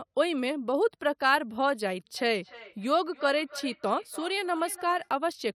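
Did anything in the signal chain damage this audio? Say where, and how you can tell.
Yes. Feedback echo between two devices appears from 2.18 to 5.12 s, a call-processing fault. The speech returns at a steady interval of roughly 300 ms, each return thinner and more ringing, peaking at about 17 dB below the direct speech. Two devices in the same room share the call. One plays the other's audio, and that microphone picks it up again. Each echo canceller cancels only its own loudspeaker's output, so the loop persists.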